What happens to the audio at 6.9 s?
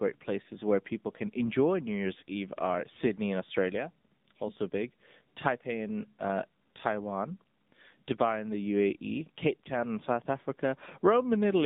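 At 6.9 s the speech is passing through the AMR narrowband mobile codec, as it does for the whole clip. The line carries only about 150 Hz to 3.7 kHz. Few pulses per frame render the voice buzzy and synthetic, which points to a low mode near 7.4 kbit/s.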